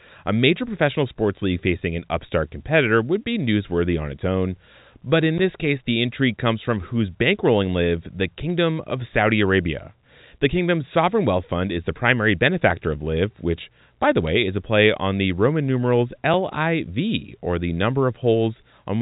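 A speech recording carried over a G.711 A-law telephone line, so nothing reaches above 4 kHz. At 5.38 s, just before "this case the intrigue", there is a block of digital silence lasting about 11.6 ms, which fits a 512-sample buffer the program failed to fill in time. The waveform drops to near silence with abrupt edges, and the spectrogram shows a thin vertical gap. Bit errors on the digital phone line appear at 8.50 to 8.54 s and again at 14.27 to 14.29 s, between "which by the" and "is a play on". There the error rate is about five times higher, though both bursts are sparse. Each flipped bit corrupts a single sample, and hits on the sign or high bits produce sharp ticks. On the waveform these are isolated one-sample spikes, and on the spectrogram they are hairline vertical streaks spanning the full band.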